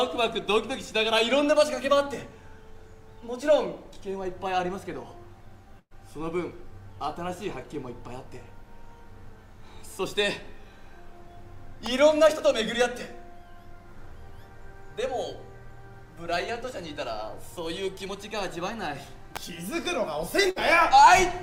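At 5.79 s a burst of packet loss leaves the receiver without data, and it fills about 112 ms with a continuation of the last sound that fades away, including about 50 ms of silence. The audio picks up again at 5.93 s, having skipped about 120 ms. A second burst at 20.51 to 20.58 s is bridged the same way for about 53 ms, with about 60 ms of the audio missing.

Between these, at 11.86 s and 19.36 s, a sharp snap or tight cluster of clicks sits on top of the sound. Each is an electrical switching spike, likely a nearby switch, motor or static discharge arcing briefly and coupling into the audio line.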